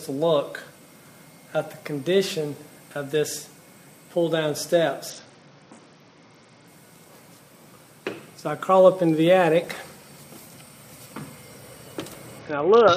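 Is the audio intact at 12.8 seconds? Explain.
No, a Bluetooth SBC bit pool drop runs from 12.39 s to the end: treble dulls and gritty noise rises, consistent with roughly 66 kbps, continuous rather than dropouts.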